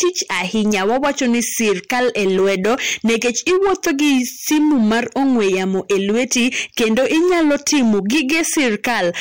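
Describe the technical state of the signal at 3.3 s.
At 3.3 s you're hearing hard clipping, and it runs through the whole speech clip. The level's driven about 11 dB past what the chain can pass, so roughly one sample in seven gets sliced flat, giving a harsh fuzz on every louder syllable.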